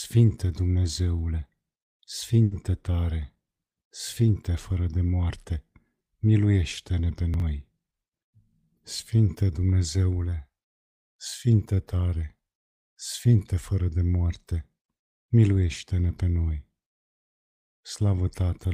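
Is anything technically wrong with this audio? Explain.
Yes, there are two timing faults.

From 2.43 to 2.53 s there is a short stall from a late packet. A packet arrived late and the jitter buffer ran empty, so about 80 ms of the last sound is held and stretched. Playback then resumes at the same point, 80 ms later than before. Unlike packet loss, nothing is skipped.

Between 7.34 and 7.42 s there are chunks out of order. A 20 ms chunk arrived three chunks late and plays after the ones that should follow it. This leaves a brief jumbled moment with three hard joins. Unlike a stall, nothing is held or stretched, and no audio is lost, only misordered.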